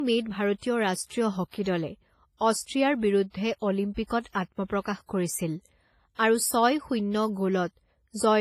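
Low-bitrate audio saved at a high bitrate runs through the whole clip. Nothing in the speech reaches above 15.4 kHz, and the grainy smearing of an aggressive low-rate encoder stays audible throughout. This likely comes from audio first squeezed by a coarse codec, in the range of WMA at about 24 kbit/s, and then re-saved as MP3 at a generous rate near 190 kbit/s. The second pass enlarges the file but cannot restore the detail the first one discarded.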